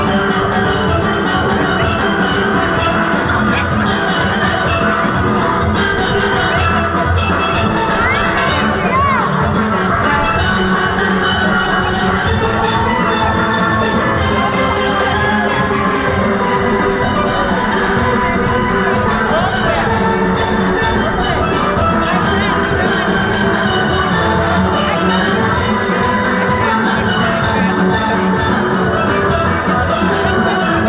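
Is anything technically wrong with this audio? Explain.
No, nothing here stands out as a technical problem; the audio sounds fine all the way through.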